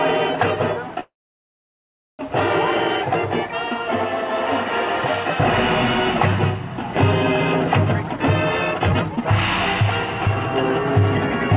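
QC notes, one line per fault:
1.00–2.21 s, call audio freeze: the sound stalls into about 1.08 s of silence, then resumes where it stopped, likely from delayed packets draining the jitter buffer.
7.84–10.32 s, jitter buffer speed-up: the audio sounds hurried at unchanged pitch, running at 141% speed as the receiver cut roughly a second of pitch-period slices to shed excess buffered delay.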